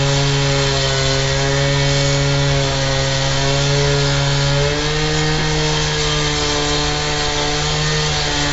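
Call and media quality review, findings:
4-bit ADPCM compression throughout. Gritty hiss rides on every loud passage and tracks its level. Damage is heavy. Sharp attacks are distorted where the adaptive step size lags. Nothing above 7.7 kHz, which fits 64 kbps ADPCM at a 16 kHz sample rate.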